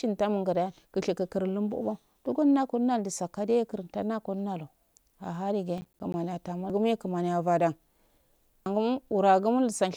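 From 5.78 to 6.14 s the speech is overlaid with processor overload crackle. The processor is failing to finish its audio buffers in time, and each missed deadline drops a short stretch of silence into the stream with hard edges on both sides. Together the gaps are heard as a gritty tearing. Their spacing points to buffers of around 10 ms, with perhaps seven of them missed before the load eases and the crackle stops.

At 6.70 s and again at 8.66 s the audio jumps forward because compressed frames were skipped. Whole frames were either missing or rejected by the decoder, so playback resumes further along the speech. The first jump loses roughly half a second and the second about 0.7 s, which fits several frames of about 85 ms each.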